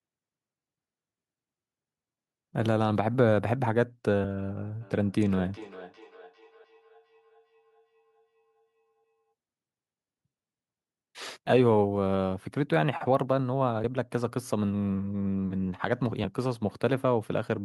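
From 4.81 to 9.34 s, a second device in the room plays this call back into the microphone, and the echo canceller there cannot remove it: feedback echo between two devices. Each phrase returns roughly every 400 ms, thinner and ringing, peaking about 21 dB below the speech.

At 6.64 s and again at 13.84 s, audio is likely being lost where the processor closes one 2.5-second chunk and opens the next, so audio goes missing between chunks. Each time, about a tenth of a second drops out and the sound jumps straight ahead.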